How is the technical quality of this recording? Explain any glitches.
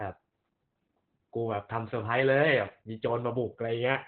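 The technical quality is poor, because heavy Opus voice compression affects the whole recording. Throughout, the codec is running in its narrowband SILK mode at a very low rate, consistent with about 8 kbps. It keeps only a linear-prediction model of the speech and a coarsely coded excitation, and it discards everything above about 4.4 kHz. As a result, the speech sounds muffled, with a hoarse, slightly robotic texture and no crisp consonants.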